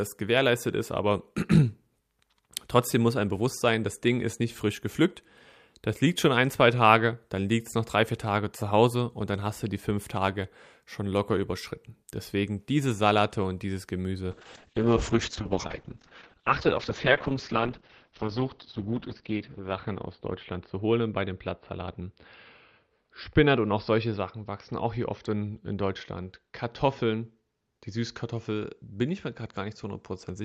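At 14.32 s, right after "und dieses", a call bitrate drop sets in and lasts to the end of the clip. The speech turns rough and muffled, which fits the encoder being pushed from roughly 64 kbps down to about 7 kbps, where it stays at its lowest for about 5.2 s. The audio band shrinks from 20 kHz to 6 kHz. A spectrogram shows a flat ceiling at 6 kHz with everything above it gone.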